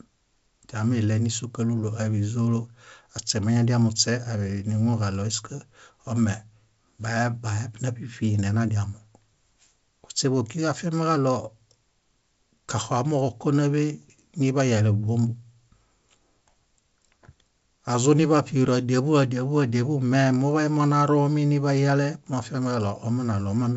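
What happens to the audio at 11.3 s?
Nothing goes wrong at 11.3 s: the speech carries straight through that moment with no dropout, click or other disturbance, only the steady G.722 wideband telephone coding heard across the clip.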